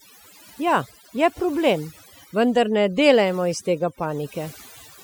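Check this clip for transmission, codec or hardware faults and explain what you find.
Overdone noise removal runs through the whole clip, from start to finish. A noise reduction stage was pushed far too hard: every frequency band whose level came close to its noise estimate was pulled right down or switched off, and the softer parts of the speech fell below that line and were cut along with the noise. The gaps between phrases drop and break up into small twinkling specks.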